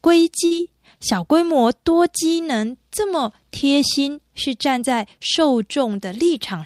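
A burst of packet loss hits this speech clip from 0.45 to 0.53 s. Several consecutive packets failed to arrive in time, so the receiver filled about 53 ms by extending the last received sound and fading it down, which leaves a brief held buzz or dying hiss in place of real speech. Playback then picks up farther along, with roughly 60 ms of the original audio simply gone.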